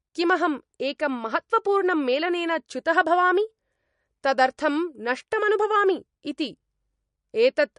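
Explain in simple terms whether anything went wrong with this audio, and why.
Yes, the speech sounds watery and swirly all the way through, with nothing above about 10.6 kHz, likely MP3 compression squeezed too hard, dropping treble and faint detail.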